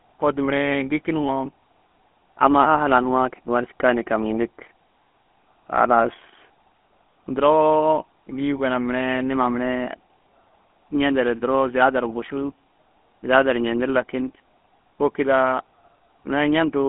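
From start to finish the speech carries the GSM full-rate codec's damage, plainly audible throughout. The codec models the vocal tract and excites it with a sparse, regularly spaced pulse train rather than the true waveform, which fits a 13 kbps full-rate stream. That coarse excitation adds a buzzy, gravelly roughness. The band sits at roughly 200 Hz to 3.4 kHz, with nothing above 3.8 kHz. A plain telephone band-limit would sound muffled but clean; here the grit marks the codec.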